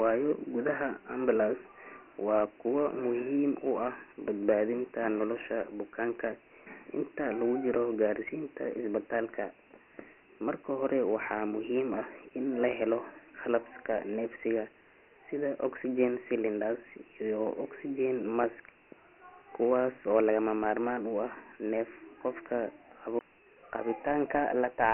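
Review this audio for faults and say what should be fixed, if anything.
The whole clip carries Dialogic VOX ADPCM damage: nothing survives above 3 kHz, and a gritty, heavy hiss rides along with the speech. That hiss comes from coarse 4-bit ADPCM steps, and the 3 kHz ceiling fits 6,000 samples a second, about 24 kbps. The 300 Hz to 3.5 kHz phone-line band thins it further. To prevent it, capture or export the source at full bandwidth with linear PCM rather than converting through VOX.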